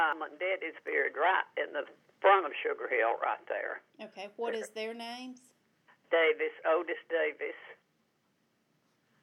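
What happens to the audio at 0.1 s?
At about 0.13 s there is damaged data in a compressed stream: corrupted bytes make the decoder misread a frame and lose sync until it finds the next header, giving a brief chirp or blip. A spectrogram shows a thin broadband vertical streak; the waveform, a momentary discontinuity.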